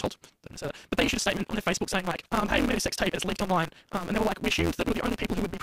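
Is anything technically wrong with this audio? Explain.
Yes. Throughout, a block size mismatch (truncated) discards each block's tail, consistent with 256-sample reads. This produces a 172 Hz buzz and speech running 1.88 times fast with its timbre kept.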